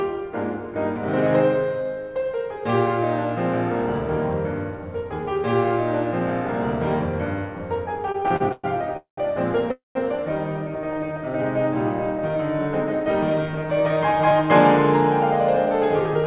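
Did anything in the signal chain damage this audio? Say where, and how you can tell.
Yes. At the network and jitter-buffer stage of this G.711 mu-law call path, which passes this music band-limited to nothing above 4 kHz, there are repeated stalls (stutter) from 8.08 to 8.97 s. Packets kept arriving late, the buffer emptied ten times, and the receiver stretched the last sound across each gap, the longest 116 ms. About 28% of that span is filled-in audio, so the music drags and stutters with nothing lost.

Two call audio freezes follow, from 8.97 to 9.19 s and from 9.71 to 9.97 s, likely caused by packets held up in transit draining the jitter buffer. Each begins as a held, fading continuation, then goes silent for 120 ms and then 150 ms before the music resumes where it stopped. This adds 206 ms and then 238 ms of delay.

A jitter buffer slow-down runs from 10.94 to 11.43 s. The buffer was rebuilding its reserve by repeating single pitch periods, adding 76 ms. 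The music plays at about 86% speed with the pitch unchanged, so sounds are drawn out.

Jitter buffer speed-ups run from 13.3 to 14.43 s at 110% and from 15.57 s to the end at 111%. Each time the buffer held too much audio and trimmed short pitch-period pieces, roughly 100 ms per stretch. The pitch stays the same, but the tempo rushes and loses its steadiness.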